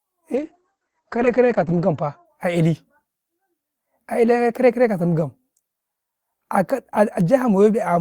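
Speech with a call bitrate drop from 0.37 to 2.31 s. The top end is cut from 20 kHz down to 8 kHz, and the sound turns rough and watery, worst for about 1.49 s, which fits the encoder falling from roughly 32 to 9 kbps. Unlike packet loss, the sound stays continuous, with no gaps or stutters.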